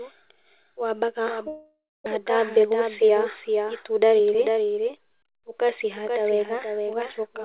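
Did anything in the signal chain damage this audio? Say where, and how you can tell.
Yes. Throughout, a full-band copy of the speech trails by roughly half a second, about 5 dB down, with no room colour: a doubled audio track, likely from a second, slower capture path.

Network stage: from 1.48 to 2.08 s, a long network dropout, likely from a delay spike. Concealment buzz fades to 0.26 s of silence, and about 0.4 s of audio never returns.

Jitter buffer: from 2.16 to 4.58 s, the speech runs at 106% speed with pitch unchanged. This jitter buffer speed-up trims pitch periods, roughly 150 ms in total, to draw down the built-up delay.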